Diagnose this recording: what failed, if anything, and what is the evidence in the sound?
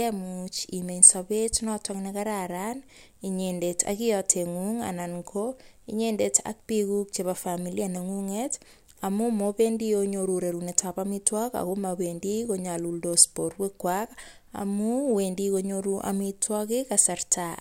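Nothing failed: no stage of the chain, from wiring through converter, buffer, processing and playback, leaves audible evidence of a fault in this speech recording.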